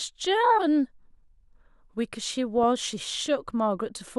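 From 2.58 to 2.64 s the speech breaks into DAB burbling. Weak reception let a small fraction of bits slip past error correction. Damaged scale factors make single sub-bands jump in level, which fits a handful of corrupted frames. It sounds like brief blips of noise.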